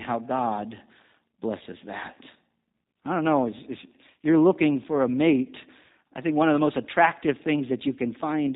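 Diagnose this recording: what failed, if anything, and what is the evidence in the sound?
Codec stage: G.729 coding throughout, with no content above 4 kHz and a rough, synthetic buzz that fits 8 kbit/s pulse-based rebuilding, unlike a plain low-pass filter.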